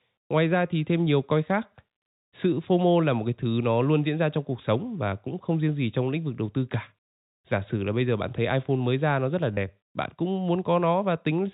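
At 9.54 s there is a 30 ms packet loss with last packet repeated: a lost stretch is filled by replaying one packet, giving a brief robotic stutter.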